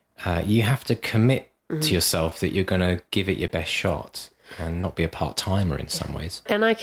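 Brief smears or wobbles break the speech at 2.29–2.33 s, just before "that you're going to", at 3.47–3.51 s between "to give it your" and "shot and", and at 4.81–4.85 s before "be a part timer". This is short concealed packet loss: about 20 ms of audio arrived too late each time, and the receiver bridged it by extending the preceding sound before blending back in.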